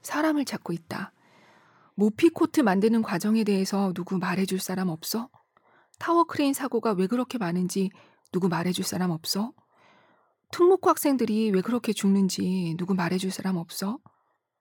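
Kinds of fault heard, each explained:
Nothing stood out on listening to this speech clip.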